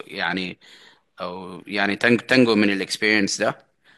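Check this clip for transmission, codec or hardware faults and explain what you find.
The speech signal holds steady throughout, with no audible transmission, coding or hardware problem anywhere in it.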